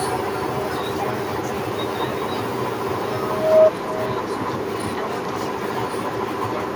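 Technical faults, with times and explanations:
Throughout, echo with no canceller: every phrase is followed around 400 ms later by a copy about 11 dB quieter and thinner. The far end is playing the speech through a loudspeaker into its own microphone, and nothing removes that path, so the sound returns after the network round trip. On a spectrogram each syllable has a fainter twin shifted right by that gap. The waveform shows low trailing bursts filling the pauses.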